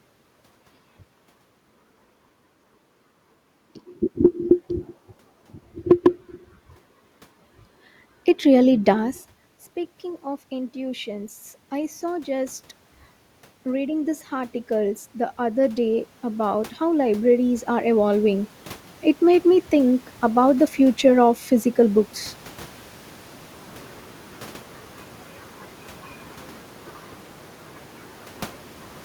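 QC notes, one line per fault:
10.01–12.6 s and 13.63–18.53 s, automatic gain rising: after the level at the microphone drops by about 13 dB, likely because the talker moved back around 9 s, the automatic gain control lifts its gain by about 5 dB over 2.6 s, then by about 10 dB over 4.9 s. Unlike a talker moving, where only the voice changes level, here the room noise swells along with the voice, and the rise is a slow, steady ramp.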